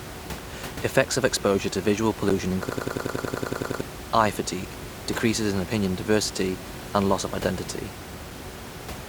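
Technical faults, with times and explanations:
2.29 s and 8.31 s, gap between stream segments: the sound cuts out for about 11 ms after "of exposure to visual" and for about 3 ms after "and loss of identity". Adjacent 2-second segments are timestamped slightly apart, so the player pads the difference with digital silence. Nothing is lost, but the hole adds time. The waveform drops abruptly to a flat line, with the room noise at about 13 dB below the speech also vanishing. The spectrogram shows a thin vertical empty stripe with hard edges.
2.69–3.81 s, system hang loop: just before "eye fatigue decreases in", a 92.9 ms fragment repeats exactly 12 times, producing a mechanical stutter at about 10.8 Hz. The machine stalled while the audio hardware kept replaying the same ring buffer, which fits a 4096-sample buffer. About a second of real audio is lost. The waveform shows identical blocks tiled end to end, and the spectrogram shows the same pattern copied repeatedly, with seams every 92.9 ms.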